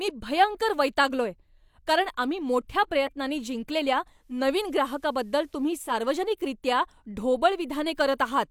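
From 4.14 to 6.00 s, digital radio blending to analogue: a 325 ms cross-fade to FM brings faint hiss and an about 1 dB level shift. Unlike a dropout, the sound never stops.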